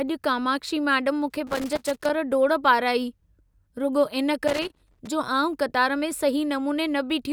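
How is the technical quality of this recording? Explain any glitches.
The recording has loose connector crackle in two places. The first burst runs from 1.30 to 2.10 s. The second runs from 4.48 to 5.07 s. A worn or dirty contact in the signal chain is shifting and briefly losing touch. Each break chops the speech on and off very fast, and any DC on the line turns the breaks into pops. The result is an irregular, scratchy crackle over the speech.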